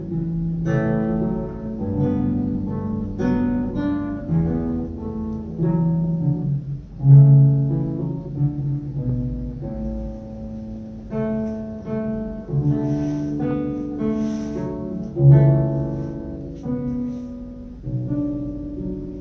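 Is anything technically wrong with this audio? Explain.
Yes, there is a wrong sample rate throughout the clip. Playback runs at 0.667 times speed and about 7 semitones low, which fits 24 kHz material played at 16 kHz. The sound is slow and deep, and a spectrogram shows every feature stretched in time and compressed downward in frequency.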